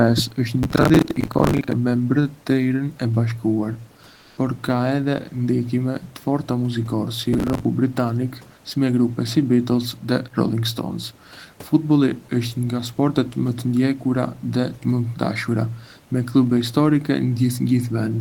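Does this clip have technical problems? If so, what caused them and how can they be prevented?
Yes. Two kinds of fault are audible.

Processor overload crackle occurs from 0.63 to 1.73 s, right after "është një", and from 7.33 to 7.65 s, leading into "britanik me grupe". The processor repeatedly missed its deadline for each short audio buffer, which fits a buffer of about 10 ms. Each miss replayed a scrap of old audio with hard edges, so dozens of misses in a row merge into gritty tearing. Unlike a single dropout or clipping, the texture is a dense, rapid crackle riding on the sound that stops cleanly once the load eases. To prevent it, enlarge the buffer or reduce CPU load from other processes and effects.

Comfort noise in place of the background appears from 4.15 to 4.37 s, about 220 ms. The genuine room noise, which sits about 32 dB below the speech and carries its own texture elsewhere, gives way to a smooth, featureless hiss with a level shift of about 2 dB. 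The likely cause is Opus discontinuous transmission (DTX): the encoder stopped sending during the pause and the receiver synthesised noise instead. A noise gate would leave near-silence rather than a bland substitute noise. To prevent it, disable DTX in the encoder settings.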